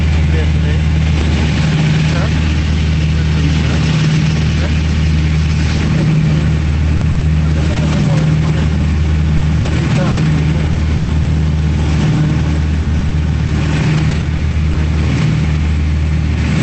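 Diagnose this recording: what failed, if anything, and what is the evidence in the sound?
Network stage: repeated packet loss (robotic sound) over three stretches, 6.97–8.19 s, 9.37–11.27 s and 12.83–14.77 s. Late or lost packets leave holes, up to 40 ms in the first and last stretches and up to 120 ms in the middle stretch. Concealment fills each by extending the preceding sound, producing a choppy texture with pieces missing.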